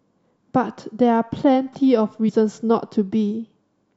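At 2.28 to 2.30 s, damaged data in the compressed stream means the decoder hits corrupted bytes it cannot read properly and loses sync while it hunts for the next valid frame header. The result is a brief glitch that breaks into the speech.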